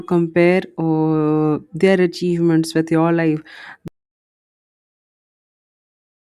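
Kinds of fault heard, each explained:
Audio dropout to silence: the input feed was likely lost partway through, perhaps from a disconnected device, a failed link or an accidental mute, while the recorder kept writing silence. The speech stops abruptly at 3.88 s, right after "achievements with your life", and from there to the end of the clip there is nothing at all, not even room tone, so whatever followed is missing.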